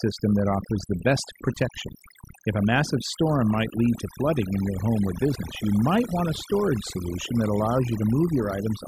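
From start to finish the speech carries overdone noise removal. A noise reduction stage was pushed too hard, switching off individual frequency bands whenever they sank toward its noise estimate, so softer parts of the voice vanish along with the noise. The background becomes near silence dotted with twinkling specks. Unlike a noise gate, which mutes everything at once between phrases, this thins the sound band by band, even inside the voice itself.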